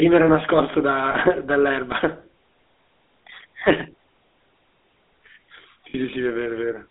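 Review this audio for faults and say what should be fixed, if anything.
The GSM full-rate codec is audible throughout. The sound is limited to about 250 Hz to 3.7 kHz. Pulse-driven excitation adds a plainly audible buzzy, gravelly roughness, consistent with 13 kbps coding.

Lost GSM frames cause two brief faults, at 1.12 to 1.16 s and at 5.90 to 5.96 s. In each, the last good frame is repeated, which produces a short metallic ring. The lengths suggest one lost frame and then two.

To prevent these faults, use a wideband codec on a more reliable link so that frames arrive intact.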